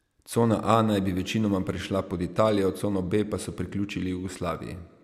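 Nothing in this recording jumps out as a technical fault, and the speech carries along without any glitch worth pointing to.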